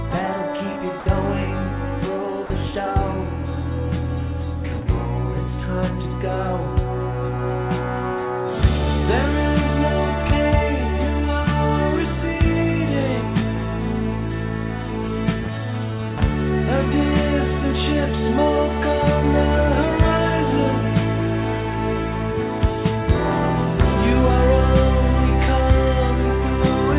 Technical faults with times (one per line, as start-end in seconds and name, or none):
1.00-1.06 sound dropped by the voice detector
2.46-2.50 sound dropped by the voice detector